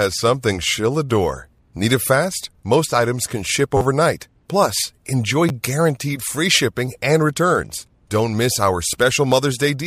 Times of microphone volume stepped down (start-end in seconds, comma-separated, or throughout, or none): none